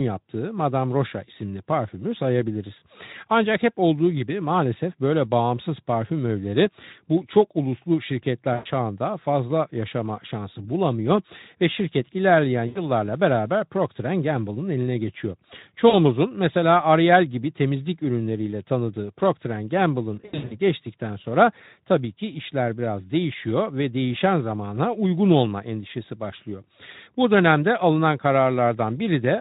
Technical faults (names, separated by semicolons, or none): VoIP packet loss concealed by the speech codec